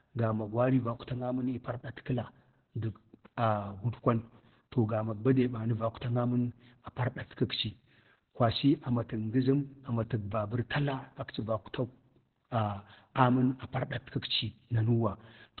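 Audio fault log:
throughout, Opus voice compression: speech sounds muffled, hoarse and faintly robotic with nothing above 4.3 kHz, the narrowband SILK coding you'd expect at around 8 kbps.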